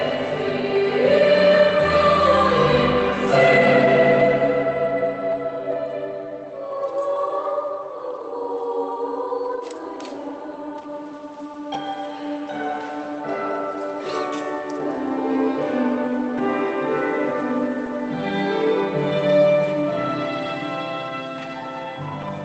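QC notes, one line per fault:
No faults were heard in this clip. It has passed through a WebRTC call path, and its high end stops at about 8 kHz, consistent with an Opus codec at a modest bitrate.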